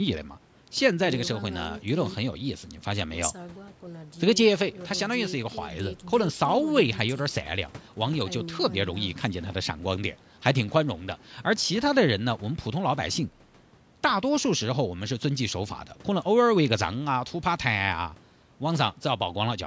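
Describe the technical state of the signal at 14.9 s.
At 14.9 s the signal is intact, with nothing heard beyond the ordinary call microphone processing, which trims the deepest bass and leaves no content above 8 kHz.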